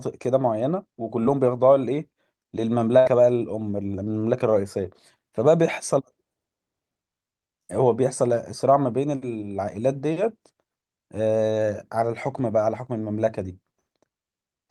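At 1.23 to 1.27 s, a short concealed packet loss leaves a brief smear. About 20 ms never arrived in time, and the receiver patched the hole with a continuation of the preceding sound.

At 2.99 to 3.07 s, a burst of packet loss follows. The receiver extends the last sound, fading it, and then the speech resumes about 60 ms further on.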